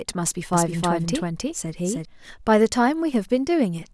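From 0.53 to 2.05 s the speech has a doubled audio track: a second, equally loud copy trails about 300 ms behind, likely from a slower capture path. It starts and stops abruptly, with no decay, and a spectrogram shows every feature repeated, shifted right.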